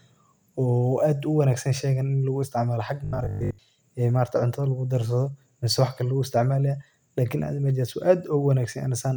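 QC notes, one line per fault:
3.05–3.59 s robotic sound from repeated short buffers: speech becomes a fixed 50 Hz metallic buzz, likely a looping 20 ms buffer; unlike stutter, words roughly persist.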